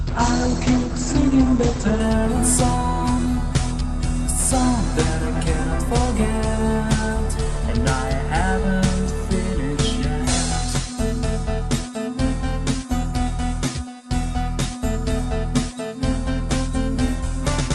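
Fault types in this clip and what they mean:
Adaptive stream starting at a low bitrate, 0 to 2.0 s: the player opens on a cheap version of the stream to start fast, so nothing sounds above 8.5 kHz and codec smearing is stronger, which fits roughly 16 kbit/s Opus, until it abruptly steps up without any gap.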